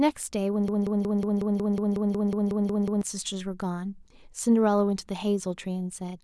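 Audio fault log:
0.68–3.02 s broken-record loop: a 183 ms fragment repeats identically 13 times, likely from a stalled stream; unlike echo, the copies never fade, and the missing audio is lost.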